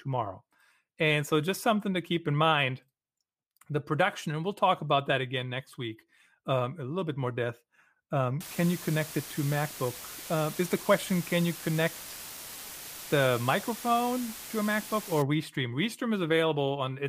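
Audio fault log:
8.41–15.22 s, low bit depth with dither: a steady, even hiss with no distortion. Only 5 bits are used, and the dither turns the rounding error into white noise about 15 dB under the speech. On a spectrogram this shows as a flat, full-band noise floor.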